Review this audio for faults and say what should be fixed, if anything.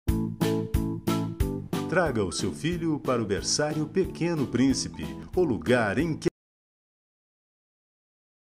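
Audio dropout to silence from 6.28 s to the end: the sound cuts off abruptly into silence, likely from lost input. The waveform is flat and the spectrogram blank, with no room tone. Secure cables and links, and monitor input levels while recording.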